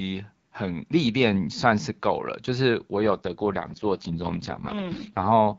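From 2.98 s to 5.32 s an AMR rate drop roughens the speech into a raspy, synthetic texture, consistent with the wideband codec stepping down from 12.65 to 6.6 kbit/s. Unlike a fallback to narrowband or packet loss, the bandwidth stays full and nothing drops out.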